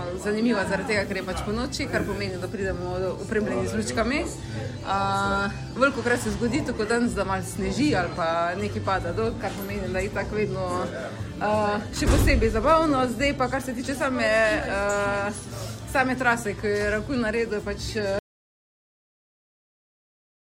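At 18.19 s an audio dropout to silence cuts the sound off abruptly and it never returns. The likely cause is lost input written as silence, leaving a flat waveform line and a blank spectrogram.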